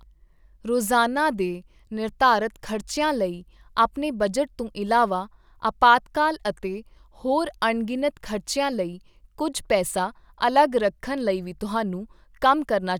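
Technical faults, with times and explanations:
Nothing here needs flagging; the speech runs along without a single technical hiccup worth a timestamp.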